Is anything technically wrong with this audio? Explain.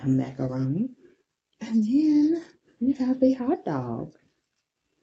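No, nothing is wrong; the top end stops around 8 kHz, as expected from a normally working call path with a wideband codec setting.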